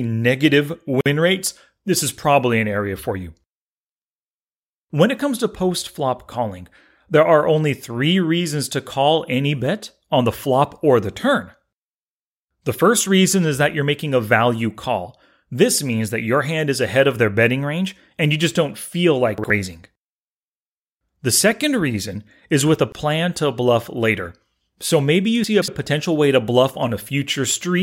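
At 1.01 s the speech drops out for about 50 ms, a sudden hole with slightly softened edges, and then resumes just before "rates this is probably" exactly where it stopped. This is a gap at a join of encoded pieces. The audio was encoded in separate sections and spliced without trimming, so the encoder's start-up delay and the padding of the previous section's last frame both remain as silence.

Just after "you just don't feel", at 19.38 to 19.50 s, there is a short jumbled moment. These are chunks out of order. A 60 ms block arrived one chunk late and plays after the block that should follow it. No audio is lost, but the reordering creates three hard joins.

At 22.92 s a second gap at a join of encoded pieces appears. It is shorter, about 26 ms, and again the sound picks up from where it stopped.

Between "maybe you" and "potential way to bluff", at 25.44 to 25.68 s, a longer garbled stretch is heard. 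This is also chunks out of order, but here a 60 ms chunk landed three chunks late. The misplaced audio therefore sits further from its proper position, and the scramble lasts about a quarter of a second.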